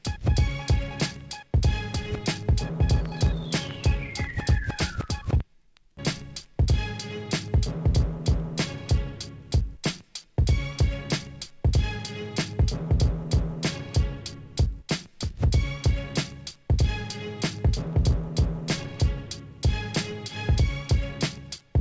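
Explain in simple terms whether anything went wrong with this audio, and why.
Nothing went wrong with this audio. It came through a normal call connection, which is why there is no sound above about 8 kHz and the top end sounds a little dull.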